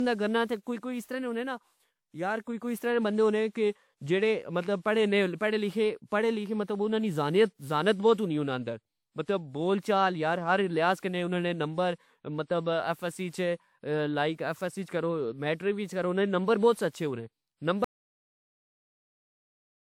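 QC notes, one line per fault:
throughout: generation loss. Swirly, smeared and hollow texture, with blurred attacks and nothing above 19.8 kHz. This is more damage than a single WMA pass near 128 kbit/s would leave, so the likely cause is repeated decode and re-encode, around seven passes.
17.84 s to end: audio dropout to silence. The speech cuts off mid-flow and the last two seconds are silent, with no room tone. This is likely lost input, such as a disconnected device or a stray mute, while the recorder kept writing samples.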